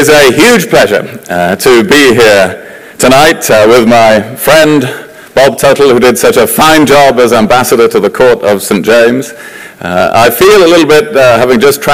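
A harsh, constant fuzz sits on every loud moment from start to finish, with the tops of the sound gritty and buzzing rather than clean. This is hard clipping: the signal was pushed about 20 dB past what some stage in the chain could pass, so its peaks were sliced flat. With nearly a third of the waveform cut off, those flattened tops spray harmonics high into the spectrum, which is the fuzz heard throughout.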